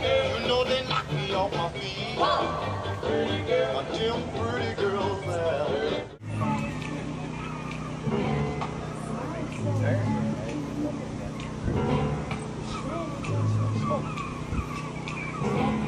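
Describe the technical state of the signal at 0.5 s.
At 0.5 s the signal is intact, with no dropout, distortion, or other audible fault.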